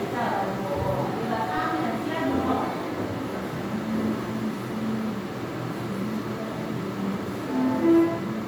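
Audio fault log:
Throughout, generation loss: the audio has a swirly, smeared, hollow character, with blurred attacks and spectral gaps that sound worse than a single MP3 pass would, and nothing above 20.1 kHz. The likely cause is repeated MP3 decoding and re-encoding, around seven passes, each at a bitrate that fits 128 kbit/s. Every pass quantises again on a shifted frame grid, so noise and holes in the spectrum build up.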